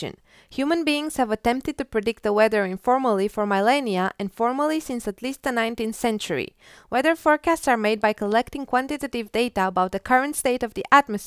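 No technical faults can be heard anywhere in the recording.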